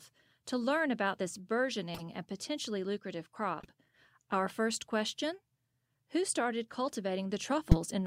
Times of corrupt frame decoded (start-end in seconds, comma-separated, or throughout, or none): 1.94-2.02, 3.60-3.70, 7.71-7.77